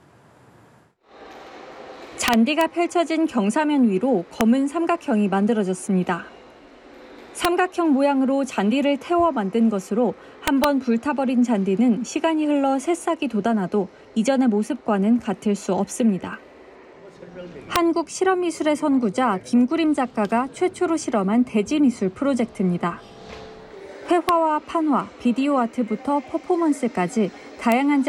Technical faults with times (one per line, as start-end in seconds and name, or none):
2.28-2.61 integer overflow
4.41 integer overflow
7.45 integer overflow
10.48-10.64 integer overflow
17.76 integer overflow
24.29 integer overflow
27.72 integer overflow